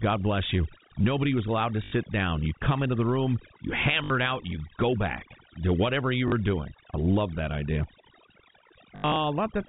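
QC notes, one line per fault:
Throughout: overdone noise removal. Over-strong noise reduction gates bands near the noise floor, leaving twinkling specks in near-silent background.
1.84–1.92 s, 4.04–4.10 s, 6.28–6.32 s, 8.96–9.16 s: packet loss with last packet repeated. Gaps of 80, 60 and 40 ms, then losses scattered over 200 ms with an 80 ms longest run, are filled by replaying audio. The runs buzz robotically, which fits 20 ms packets.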